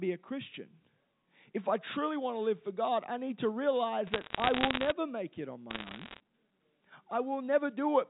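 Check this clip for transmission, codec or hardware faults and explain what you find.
One transmission fault appears twice. Bit errors on a digital phone line, at 4.07–4.92 s after "I need to" and 5.70–6.20 s after "make it on": about 0.7% and then 1.0% of bits flip on the G.711 A-law line, each corrupting one sample, producing sharp ticking crackle over the speech.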